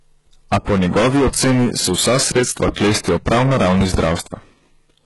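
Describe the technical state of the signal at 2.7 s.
At 2.7 s, right after "oceni se vsa sredstva", a single loud pop sits on top of the speech from 2.68 to 2.71 s, peaking roughly 20 dB above the surrounding signal. A sudden voltage step or pulse, likely from a plug, switch, static discharge or driver glitch, was added to the signal, and the stages after it shaped it into a short, sharp pop. The speech continues underneath it.

The same moment also carries hard clipping, present across the whole clip. The signal was driven about 24 dB past what some stage could pass, so the peaks are sheared flat on roughly a fifth of all samples. Those flat tops generate harmonics high in the spectrum, heard as fuzz laid over every loud sound.

The audio at this point is also band-limited, with nothing above 11.5 kHz, and shows heavy codec damage, likely from HE-AAC compression at a low rate that fits around 12 kbps. 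In this scheme only the lower spectrum is actually coded. The treble is synthesised by copying lower bands upward under a coarse envelope, so the high-frequency content is not the original and its harmonics do not line up with those below the crossover.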